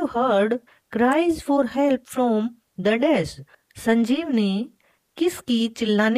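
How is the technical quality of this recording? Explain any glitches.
There is one glitch. At 1.12 s, an electrical switching spike adds a brief, sharp transient on top of the sound. It is likely caused by a nearby switch, motor or static discharge arcing into the audio line.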